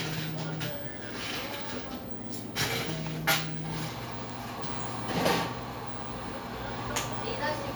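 At 4.30 s a sharp snap lands on the sound: an electrical switching spike near -25 dBFS, likely a nearby switch arcing into the line.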